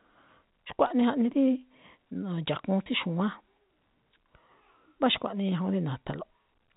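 At 2.84 to 2.86 s the speech briefly holds and turns slightly buzzy, a tiny frozen stretch rather than a gap of silence. This is packet loss with pitch repetition. About 20 ms of audio went missing, which fits a single lost packet, and the receiver filled the hole by repeating the last pitch period it had, so the tone sustains unnaturally for a moment before the real signal resumes. Around it, the narrowband G.711 telephone coding carries the speech with nothing above 4 kHz.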